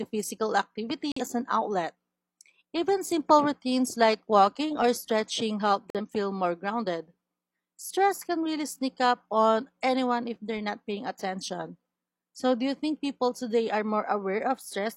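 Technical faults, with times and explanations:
1.12–1.22 s and 5.90–6.01 s, corrupt frame muted. Speech cuts abruptly to silence for 0.1 s, before "as an outlet" and between "walking or stretching help" and "feel more grounded". The decoder rejected damaged frames. The player inserted silence. Each gap fits two frames. Timing holds.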